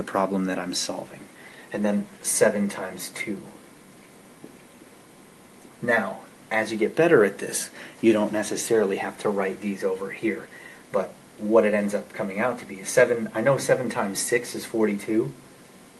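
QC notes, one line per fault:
No faults found; the call path is working normally, its top end stopping near 12 kHz, which fits an Opus link at about 32 kbps.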